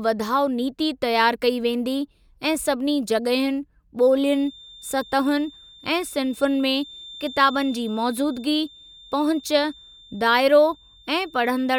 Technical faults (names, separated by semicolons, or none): feedback whistle